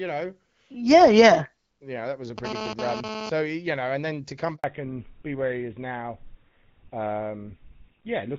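From 2.38 to 3.30 s a GSM phone buzz intrudes: a harsh 217 Hz rasp, about 8 dB below the speech, pulsing intermittently as a nearby handset transfers data. At 4.56 s a handover gap of 80 ms follows, the speech dropping to silence while the call switches networks, with the audio in that stretch lost. From 4.64 s to the end comes a fallback to narrowband: everything above 4 kHz disappears, and the speech turns duller and rougher than the clear HD Voice sound before it, which fits a 12.65 kbit/s wideband rate.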